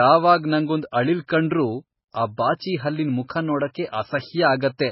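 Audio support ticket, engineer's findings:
Speech band-limited the whole way through, nothing above 5.5 kHz, heavy watery swirl and smeared consonants. Likely MP3 compression: encoder starved of bits, which fits roughly 16 kbps, so it's chopping the treble and toggling weak frequency lines frame to frame.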